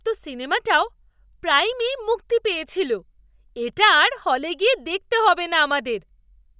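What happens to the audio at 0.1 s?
Nothing goes wrong at 0.1 s; the speech is intact at that point, with no dropout, click or distortion.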